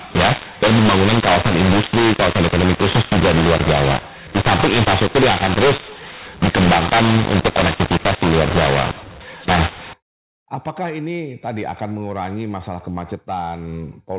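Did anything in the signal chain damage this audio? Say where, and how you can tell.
Yes. From the start to about 9.9 s the speech has a mu-law and A-law mix-up at the codec stage: it was encoded as G.711 mu-law but decoded as A-law. The two logarithmic curves don't line up, so sample levels come out scrambled, some too big, some too small, giving that harsh, gritty distortion. The quietest samples get lifted well above zero, which is why the pauses fill with hiss.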